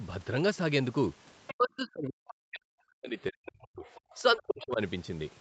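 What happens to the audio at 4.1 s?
From 3.86 to 4.18 s, a faint second voice sits far below the talker, likely the other side's voice leaking through: loudspeaker sound the echo canceller failed to remove from the microphone. It adds a separate voice rather than changing the talker's level.

Starting at 4.15 s and running to 4.8 s, the talker's own voice dips by roughly 25 dB in places, over about half a second in total. This is speech suppressed in double talk, likely because the canceller could not separate talker from echo and turned both down. Here the talker weakens, and no voice is added.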